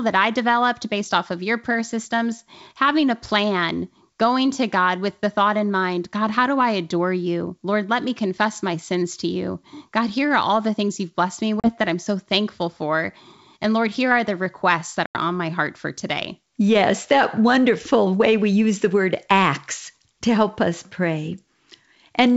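Packet loss on an ADPCM call hits at 11.60 s and 15.06 s, leaving hard-edged silent gaps of 40 ms and 90 ms, roughly a few packets and then about ten. The decoder's predictor and step size drift from the sender's, so sound resumes slightly distorted.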